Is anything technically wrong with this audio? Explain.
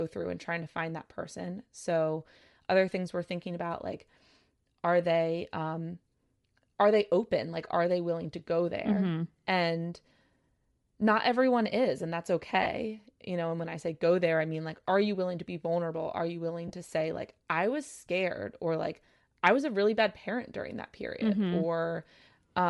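Yes. The speech carries a constant coding artefact and two brief dropouts.

Bluetooth LC3 compression runs through the whole clip. The upper frequencies sound grainy and breathy. That points to the encoder zeroing much of the upper spectrum and filling it with noise, likely LC3 at a bitrate around 48 kbps, working in 10 ms transform frames. A plain low-pass limit would sound dull and muffled instead. Here the top end is still present, but it is noisy.

Lost LE Audio frames occur twice. The first runs from 12.63 to 12.66 s, right after "everyone is and that's", and fits three lost 10 ms frames. The second runs from 16.68 to 16.71 s, between "you willing" and "to say like I", and fits two. The decoder concealed each gap by repeating the last spectrum with randomised phase, so there is a short noisy smear rather than a hard click or a silent hole.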